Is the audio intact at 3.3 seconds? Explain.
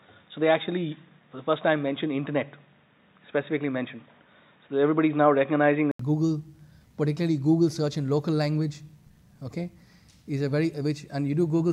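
No, at 3.3 s it's dull and boxy with nothing above 3.8 kHz, likely from the input switching to a poorer device, which lasts until 5.99 s, where a brief gap precedes clearer sound.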